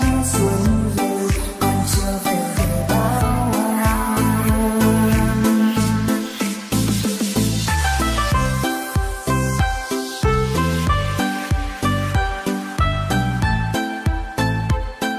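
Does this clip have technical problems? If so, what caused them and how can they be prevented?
No, the signal shows no technical faults anywhere in the recording, so nothing needs to be prevented.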